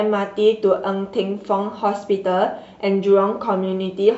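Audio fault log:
No faults detected in the speech audio; nothing to log.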